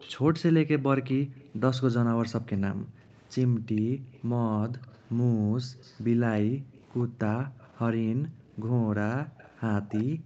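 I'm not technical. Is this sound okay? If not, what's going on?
No. From the start to 1.51 s, and again from 3.4 s to the end, a faint copy of the speech trails about 94 ms behind, likely an echo leak from someone's loudspeaker. Unlike room echo, it's a distinct repeat.

Between 1.21 and 4.13 s (about a second in total), and from 5.34 s on, the room sound drops out hard: background gated by the echo canceller.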